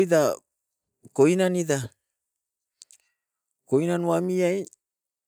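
A short recording of speech, with no technical faults to point out. There is nothing here that needs a time or a cause attached to it.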